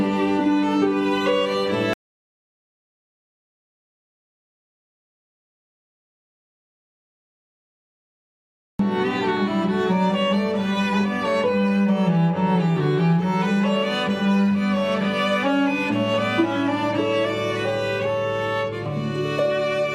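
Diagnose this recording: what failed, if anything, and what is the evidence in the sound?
Audio dropout to silence from 1.93 to 8.79 s: about 6.9 s of silence, no room tone, likely a lost input link while the recorder kept writing.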